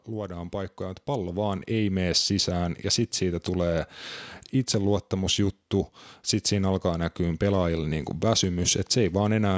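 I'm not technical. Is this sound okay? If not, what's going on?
No. From 0.07 to 2.12 s there's automatic gain rising: the call's level control judged the speech too quiet and gradually turned it up, so speech and background swell together until "sisään ja sitten siitä".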